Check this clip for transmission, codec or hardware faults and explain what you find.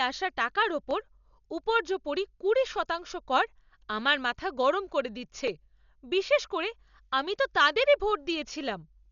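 Two faults are audible in this speech clip: heavy lossy coding throughout, and two brief dropouts to silence.

Dolby Digital compression, throughout: nothing survives above 6.9 kHz, and rough, fluttering noise fills the sparsely coded bands, likely from a low bitrate around 48 kbps.

Block of digital silence, at 0.91 s after "আসা টাকার" and 5.48 s after "মাথা গরম করে দিচ্ছে": likely unfilled output buffers zeroed 1.3 ms (fitting a 64-sample block) and 4 ms, heard as ticks.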